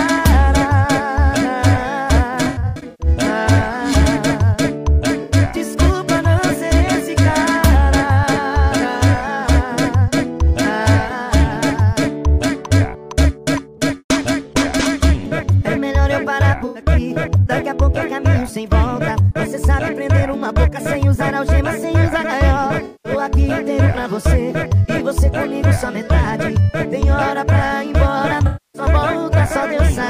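AAC frame loss with concealment recurs five times: 2.44 to 3.07 s, where about 0.36 s of audio is missing in bursts spread over 0.55 s, the longest around a tenth of a second; 5.23 to 5.33 s (64 ms); 16.58 to 16.80 s (about 0.11 s scattered over 0.17 s); 22.85 to 23.12 s (192 ms); and 28.46 to 28.82 s (277 ms). Each gap is patched from the last good spectrum, giving smeared, noisy or phasey stretches.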